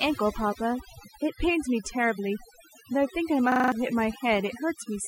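The background sits at near silence with twinkling specks all the way through. This is overdone noise removal. The reduction was set so strong that any frequency band close to its noise estimate was pulled far down or shut off. That took the quiet parts of the speech along with the noise and left isolated bands flickering on and off in the gaps.

From 3.52 to 3.72 s the sound turns into a rapid mechanical stutter, the same 40 ms fragment repeating five times at a rate of 25 Hz. This is a system hang loop. The computer or driver stalled while the audio hardware kept cycling through the same ring buffer, replaying one stretch over and over. Roughly a fifth of a second of real audio never arrived in its place.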